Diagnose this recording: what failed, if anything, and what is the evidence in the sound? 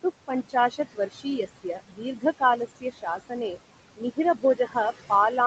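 The call processing stage's noise suppressor is overworking, producing noise suppressor artifacts throughout: the room noise, which sits about 12 dB below the speech, is pulled down by about 21 dB in the gaps, then swells back under the speech as bands gate frame by frame.

The same suppressor also causes speech cut by the noise suppressor, mistaking quieter speech energy for noise. Parts of the speech sound swallowed at 0.49 to 1.39 s, 1.63 to 2.41 s, 2.77 to 3.58 s, 3.97 to 4.18 s and 4.34 to 4.76 s, with drops of about 16 to 21 dB.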